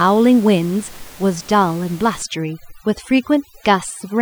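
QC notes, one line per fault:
2.22–4.22 s overdone noise removal: room noise, about 23 dB below the speech until then, drops and breaks up into twinkling specks; an over-strong noise reducer is cutting frequency bands near its noise estimate, quiet speech detail included.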